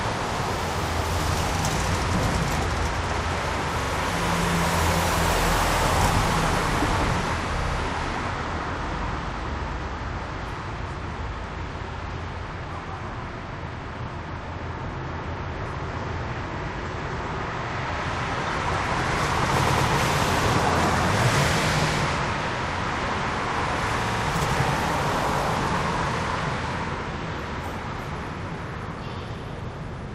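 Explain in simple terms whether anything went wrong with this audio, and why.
Repeated frames stutter the audio at 3.81 to 3.89 s, 7.58 to 7.77 s, 19.66 to 19.87 s and 24.05 to 24.24 s. Each time, a short slice of sound plays over again: about 43 ms twice at the first spot, 64 ms three more times at the second and fourth, and 107 ms twice at the third. The stored or sent compressed data contained those chunks more than once, so the player simply played them again, adding about 85 ms at the first spot and about a fifth of a second at each of the others.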